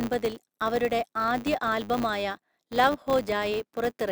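From start to finish the speech carries a filter restarted on every block: the filter discards its state at each block boundary and starts again from silence, so every block opens with a small transient. These arrive 100 times a second, which fits 10 ms blocks, and are heard as a steady 100 Hz buzz that rises and falls with the speech level. A spectrogram shows evenly spaced vertical striations with harmonics at multiples of 100 Hz; the waveform shows tiny spikes every 10 ms.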